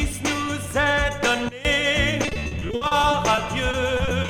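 At 1.49 s a sudden gain jump drops the level by about 18 dB until 1.65 s. Sound and noise fall together, likely from an unramped gain change.

From 2.25 s to the end, repeated packet loss makes the sound choppy and robotic. About twenty short holes, up to 60 ms each, are patched by repeating earlier sound.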